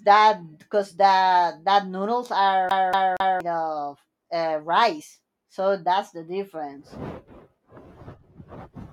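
At 2.69 s, right after "cause that that noodles", the speech catches in a CD stuck on one turn until 3.40 s, when it resumes with "of uh rice so". A scratch keeps knocking the laser back one track, so the same 0.24 s slice plays three times, each restart marked by a brief mute. The exact repetition, fixed length and even rhythm set it apart from the human stammer that precedes it.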